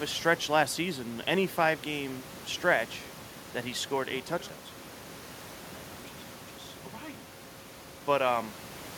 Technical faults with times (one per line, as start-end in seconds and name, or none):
none